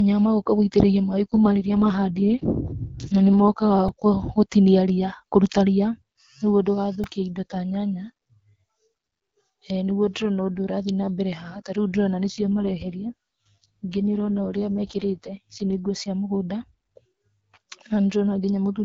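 From 1.3 to 3.49 s, an AMR rate drop from 12.65 to 6.6 kbit/s moves bits to error protection, so the speech turns rougher and more synthetic with no gap. At 3.88 s and 7.04 s, a repeated buffer replays a tiny slice, which fits a 64-sample buffer, and roughly 5 ms and 4 ms are lost, heard as brief clicky buzzes. From 12.28 to 15.80 s, just before "nguo cia", the same drop from the 12.65 kbit/s AMR-WB rate brings the rough, synthetic quality back.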